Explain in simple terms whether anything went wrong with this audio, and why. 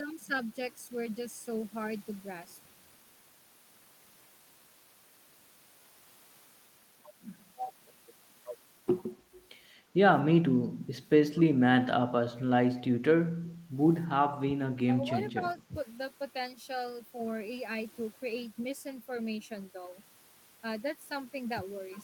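The speech briefly dips at 11.52–11.56, 14.45–14.52, 14.73–15.16 and 15.34–15.76 s. This is likely speech suppressed in double talk: the echo canceller turned the talker down while the other side spoke.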